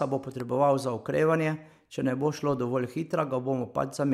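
A sudden voltage step or pulse, likely from a plug, switch, static discharge or driver glitch, entered the signal path between 0.40 and 0.42 s in this speech recording. The circuitry downstream shaped that pulse into a single loud pop, peaking roughly 5 dB above the speech level. It is heard as one sharp thump lasting about 20 ms and sitting on top of the speech, which continues underneath without a break.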